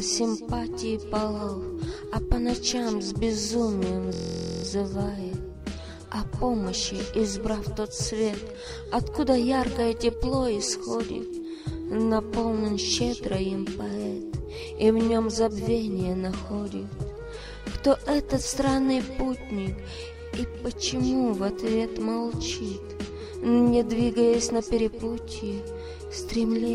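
At 4.13 s the sound locks into a system hang loop that lasts until 4.64 s. The computer or its driver stalled, but the sound hardware kept replaying its ring buffer. One slice of about 23.2 ms repeats exactly, 22 times over. That length fits a 1024-sample buffer. Because the slice is so short, it comes across as a steady buzz at 43.1 Hz, not a stutter. When playback resumes, essentially no audio seems to be missing.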